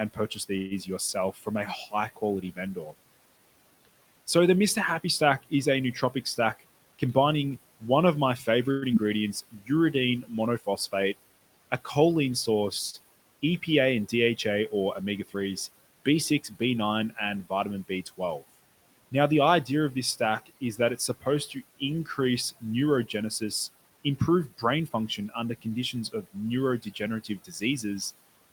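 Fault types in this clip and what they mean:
speech cut by the noise suppressor: The suppressor mistook parts of the speech for background and pulled them down, by about 14 dB at 0.14 to 2.94 s and 5.43 to 10.93 s, and about 16 dB from 13.42 s to the end. Word endings and soft consonants sound swallowed.
call audio freeze: The last sound is held as a fading buzz, for 136 ms at 0.57 s and 110 ms at 8.71 s. Then the speech resumes where it stopped. Nothing is lost, but a gap is inserted. Late packets emptying the buffer is the likely cause.
jitter buffer speed-up: The receiver cut small pitch-period slices to shed excess delay, removing roughly 150 ms each time. Speech runs about 12% fast from 6.44 to 7.51 s and about 6% fast from 22.97 to 24.97 s. Pitch stays unchanged, so it sounds hurried.
short concealed packet loss: At 8.92 s about 40 ms of speech never arrived. Only a very short fill bridges the hole before the audio blends back. 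It sounds like a quick smear or wobble, and a brief sound can drop out.
jitter buffer slow-down: From 9.03 to 9.78 s the receiver repeated single pitch periods to rebuild its reserve. This adds 51 ms and slows the speech to about 95% speed. Pitch holds steady, but sounds are slightly drawn out.
short stall from a late packet: Just after "a choline", at 12.90 s, a packet arrived late. The last sound was stretched by 36 ms, then the speech carried on. Nothing is missing, but that sound lingers with a slight buzz or dip.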